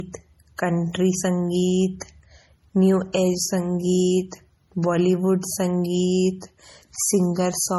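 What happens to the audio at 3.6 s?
At 3.6 s the speech carries the sound of low-bitrate audio saved at a high bitrate, a condition that runs through the whole clip rather than starting there. Nothing is present above about 13.3 kHz, and the top end has the swirly, smeared texture of heavy MP3 coding. This likely comes from a low-bitrate MP3 encode, around 32 kbit/s by the sound of it, later re-encoded at a much higher rate, which cannot restore the detail the first pass removed.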